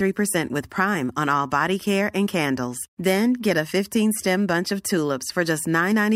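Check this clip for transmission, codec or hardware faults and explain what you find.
No faults detected.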